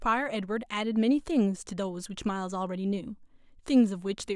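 A short speech recording with no technical faults to point to anywhere in the signal.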